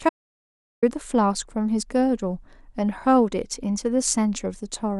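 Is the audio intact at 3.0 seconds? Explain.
Yes, at 3.0 seconds the speech plays through without any audible dropout, click, distortion or other fault.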